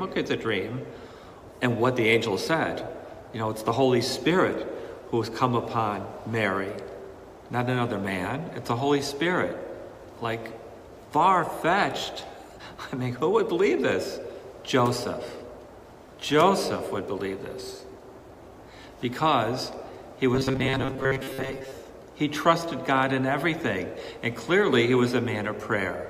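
Robotic sound from repeated short buffers appears from 20.35 to 21.72 s: the audio hardens into a rigid, metallic buzz pitched at 134 Hz, loosely following the shape of the sound but losing its natural detail for most of that stretch. The likely cause is audio arriving too seldom, so the playback fills each gap by looping the last fragment, about 7.5 ms long, which fits the buzz frequency, while the real material in between is skipped.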